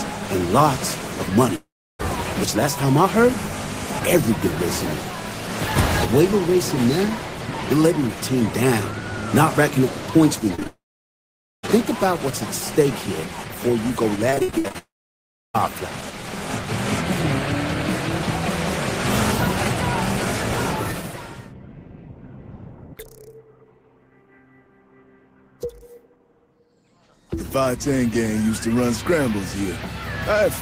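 At 1.55 s the sound turns into a fading buzz, then goes quiet for about a third of a second, resuming at 2.01 s with a piece missing. This is likely a long network dropout: roughly 440 ms of audio never arrived.

From 10.55 to 11.7 s there are scattered short gaps. About four small holes, the longest about 30 ms, were patched by stretching the preceding sound. They come across as brief ticks and smears.

Within that stretch, from 10.67 to 11.65 s, the sound smears briefly and then falls silent for about 0.85 s. A long network dropout is the likely cause. Nearly a second of audio was lost outright.

From 14.3 to 14.76 s there is repeated packet loss with a robotic sound. Eight gaps, the longest 62 ms, arrive in quick succession. Over half the span is patched-in continuation, so the sound turns choppy.

At 14.78 s the audio thins into a fading hiss, then silence for about two-thirds of a second. 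It returns at 15.56 s. This is likely another long network dropout, with roughly 760 ms missing.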